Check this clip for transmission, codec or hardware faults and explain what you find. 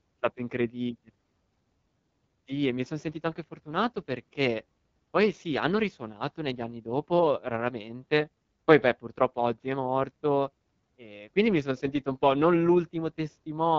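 One fault runs through the whole recording: the AMR wideband (HD Voice) codec at a low rate. Throughout the speech, the codec models the vocal tract with pulse excitation up to 6.4 kHz and substitutes shaped noise above. The plainly audible rough, raspy texture points to a low mode, around 8.85 kbit/s. A spectrogram shows smeared harmonics, a noisy band from 6.4 to 7 kHz, and nothing above 7.6 kHz.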